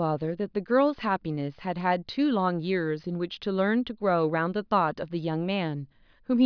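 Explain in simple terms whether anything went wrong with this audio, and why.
Nothing went wrong here.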